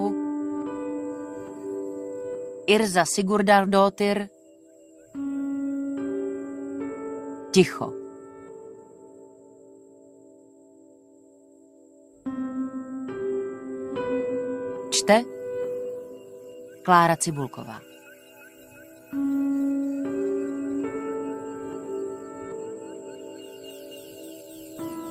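No technical faults can be heard anywhere in this audio. The sound stays steady and continuous throughout, with no moment that needs a time mark.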